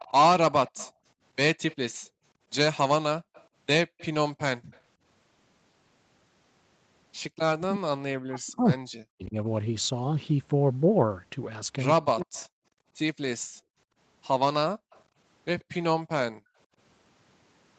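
From 0.00 to 4.81 s, a faint copy of the speech trails it by 136 ms, about 25 dB down. This is an echo leak, likely from a loudspeaker echo canceller letting residue through. Between 0.93 and 4.71 s, the background is gated by the echo canceller. The room sound drops by up to about 40 dB, for under a second in total, then returns.

From 7.56 to 9.35 s, the voice dips and breaks up for about a second and a half. This is speech suppressed in double talk, likely caused by the canceller ducking the talker while the far side speaks. The same cut, again up to about 40 dB, recurs from 11.96 to 12.36 s. A brief echo leak sits at 12.22 to 12.47 s, about 30 dB down.

From 12.64 to 16.76 s, the background is gated again, dropping out for about a second altogether. A final echo leak, about 35 dB below the speech, runs from 14.90 to 15.74 s. Its delay is still 136 ms.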